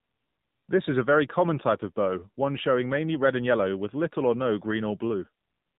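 From the first moment to the end, the speech runs through an AMR narrowband mobile codec, and the damage is plainly audible. Everything above 4 kHz is gone, so it has that boxed-in phone-call sound. The codec rebuilds the voice from a vocal-tract model fed with sparse pulses, and at this bit budget that comes out buzzy and a bit synthetic, which fits one of the lower AMR-NB modes, around 7.4 kbps.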